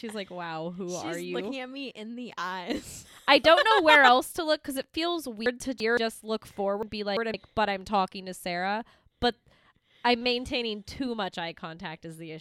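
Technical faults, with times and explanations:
5.46–5.97 s and 6.83–7.34 s, chunks out of order: in each span one 171 ms chunk plays two chunks late, giving a jumbled moment with three hard joins but no missing or repeated audio.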